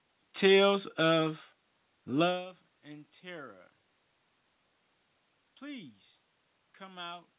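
Speech recording with no technical faults to report.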